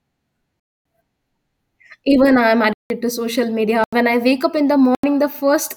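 Blocks of digital silence occur at 0.60 to 0.85 s (256 ms), at 2.73 to 2.90 s (171 ms) just before "to social", at 3.84 to 3.93 s (85 ms) just after "to social", and at 4.95 to 5.04 s (85 ms) just after "wake up in the". In each, the speech drops abruptly to silence and returns without a fade, leaving a short hole. The output buffer likely was not filled in time, and the later three gap lengths fit blocks of 4096 or 8192 samples at 48 kHz.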